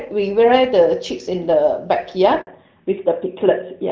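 At 2.41 s the speech cuts out in a handover gap lasting 60 ms, until 2.47 s. While the call was passed from one network to another, no speech frames got through, so the signal fades out within a few tens of milliseconds and sits at silence until the new link delivers audio. On a waveform this is a flat, near-zero stretch. A spectrogram shows a narrow vertical blank band across all frequencies.

From 2.47 s to the end, the call falls back to narrowband. Before the gap, the wideband HD Voice sound is clear with only light coding damage, which fits AMR-WB at around 12.65 kbit/s. After the switch to an older narrowband codec, consistent with AMR-NB at 12.2 kbit/s, nothing survives above 4 kHz. The speech turns duller and rougher, losing its crisp sibilance. On a spectrogram the upper energy ends abruptly at a hard ceiling at 4 kHz, beginning right where the gap ends.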